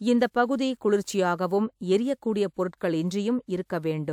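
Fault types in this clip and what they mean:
No fault types are present in this clip.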